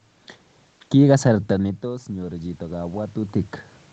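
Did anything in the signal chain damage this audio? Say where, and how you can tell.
Yes. The automatic gain control in the call processing reacted after the voice level at the microphone dropped by about 16 dB around 1.5 s, as the talker moved back. From 1.50 s to 3.61 s the automatic gain rising can be heard: the gain climbs about 6 dB over roughly two seconds, and the room noise swells along with the voice. That shared swell points to a gain stage, not the talker.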